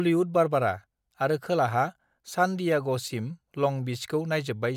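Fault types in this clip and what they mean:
Nothing stood out on listening to this speech recording.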